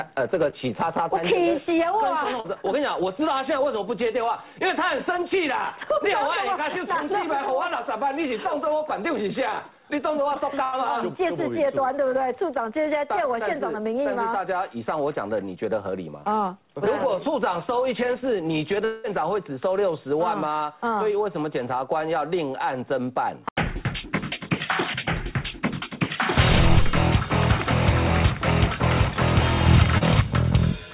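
Short concealed packet loss shows up three times: at 0.50 s for about 20 ms, at 2.40 s for about 40 ms, and at 29.98 s for about 40 ms. Each time a sliver of the stream arrived too late to decode, and the receiver extended the preceding sound to cover the hole before crossfading back. Each event is a brief smear or wobble. A burst of packet loss at 10.64 s runs to 10.75 s. About 80 ms in a row went missing, and the receiver held the last sound for roughly 83 ms while lowering its level, producing a short buzz or hiss that fades before the audio resumes slightly further on with that stretch gone. Around 18.85 to 19.06 s the sound is replaced by about 193 ms of continued, decaying buzz or hiss, with no fall into full silence, and then picks up later with about 200 ms absent. This is likely a long network dropout in which nothing arrived for that stretch and concealment covered the whole gap. 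All of this sits on a narrowband call path where nothing above 4 kHz is present, which fits G.711 mu-law at 64 kbps.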